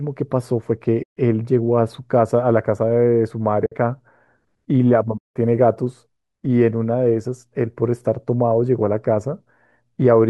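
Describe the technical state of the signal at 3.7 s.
AAC frame loss with muting runs from 3.66 to 3.72 s. The decoder zeroes the missing frames' spectrum, and the overlapping windows fade the speech down and back up, leaving a soft-edged gap of about 60 ms.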